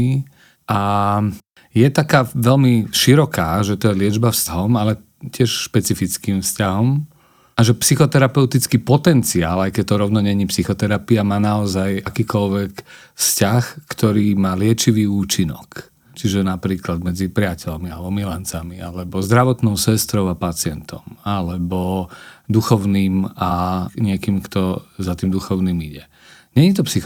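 Compressed frames skipped at 4.46–4.52 s, 12.06 s, 23.50 s and 25.24 s: whole 10 ms blocks of coded audio never reached the output, so the speech lurches forward. The gaps shrink from roughly 100 ms to about 70, 40 and 20 ms, which fits runs of whole frames being dropped.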